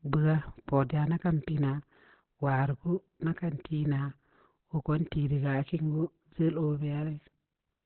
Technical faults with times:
0.00-7.86 Opus compression

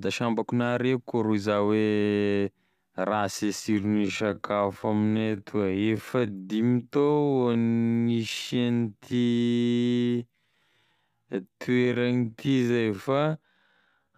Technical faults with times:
3.67-14.18 time-stretched section

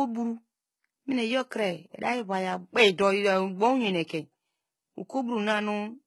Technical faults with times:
0.00-6.07 HE-AAC compression

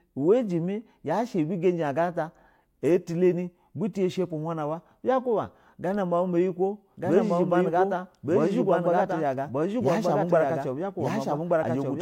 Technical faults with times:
6.97-12.02 doubled audio track

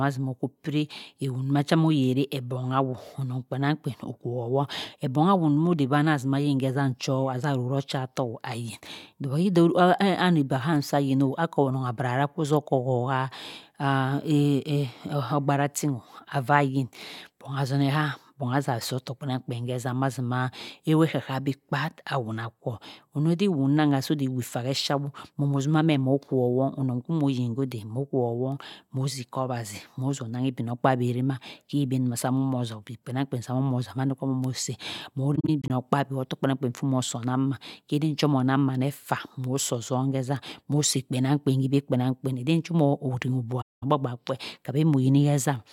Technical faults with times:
35.35-35.70 AAC frame loss with muting
43.61-43.83 AAC frame loss with muting

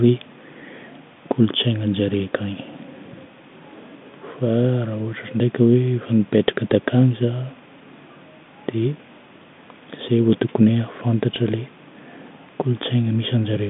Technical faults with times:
none

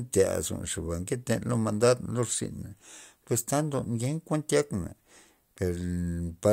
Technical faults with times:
none

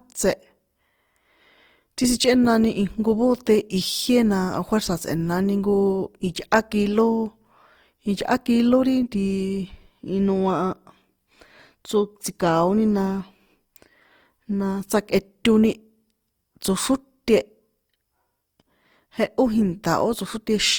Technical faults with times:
0.00-20.79 Opus compression

